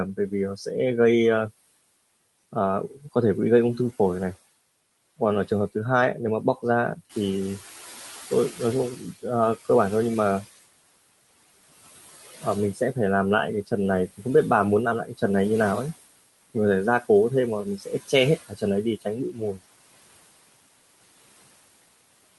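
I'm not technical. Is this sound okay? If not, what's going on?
No. Noise suppressor artifacts run throughout: the background is pushed down between phrases and rises under the speech. The noise suppressor is catching up from 7.09 to 9.14 s. The room noise gets louder around 7 s, which is genuine background rather than a fault, and for about two seconds it comes through before the suppressor adapts and pulls it down. Speech is cut by the noise suppressor at 8.96, 15.05, 17.78, 18.37 and 19.30 s. Short bits of speech are mistaken for noise and briefly swallowed, most noticeably around 17.8 and 19.3 s.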